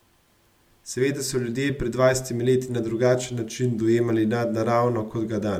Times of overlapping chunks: none

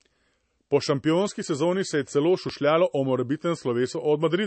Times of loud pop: 2.49-2.52

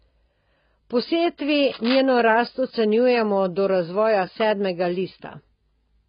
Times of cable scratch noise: 1.67-2.01

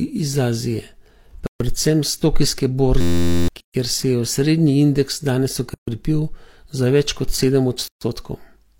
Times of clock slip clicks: none

